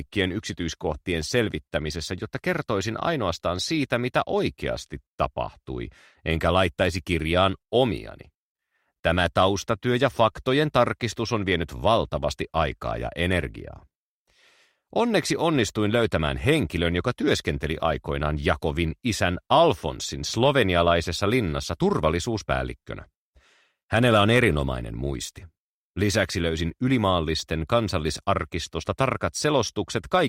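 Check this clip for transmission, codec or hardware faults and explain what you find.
Nothing in the audio points to a transmission, codec or hardware problem. The sound holds steady throughout, with nothing that calls for an explanation.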